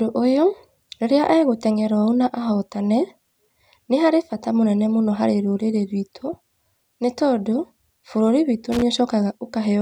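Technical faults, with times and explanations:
8.72 to 8.82 s, loose connector crackle: just after "nĩ tondũ bũrúri witũ", a worn or dirty contact in the signal path rapidly makes and breaks for about 0.1 s, chopping the speech into an irregular burst of scratchy crackle.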